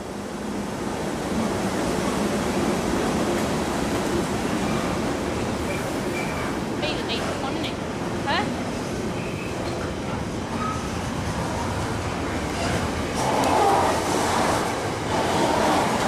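No technical faults are audible anywhere in this audio.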